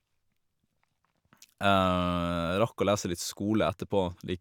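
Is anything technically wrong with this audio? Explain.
No, the signal shows no technical faults anywhere in this speech recording.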